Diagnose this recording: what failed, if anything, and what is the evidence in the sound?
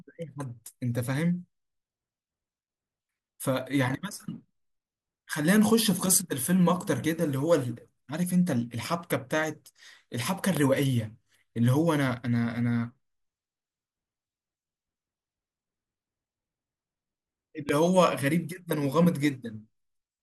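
The failure is a loud pop at the analogue stage, at 10.57 to 10.59 s and again at 17.69 to 17.71 s. Each is a single sharp thump well above the speech level, while the speech continues underneath. The likely cause is a voltage step from a connector, switch or static discharge. On the waveform each appears as a tall isolated spike, and on the spectrogram as a thin vertical broadband stripe.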